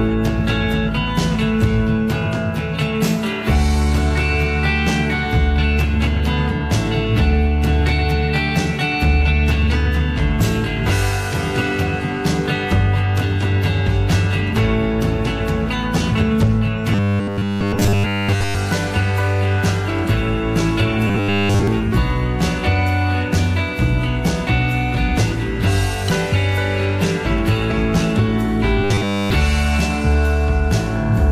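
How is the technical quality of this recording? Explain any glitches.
Three stretches have robotic sound from repeated short buffers, at 16.93–18.55 s, 21.08–21.67 s and 28.84–29.30 s. Each is a rigid 100 Hz buzz, most likely from a 10 ms chunk replaying while most of the audio (all of it in the last burst) gets skipped.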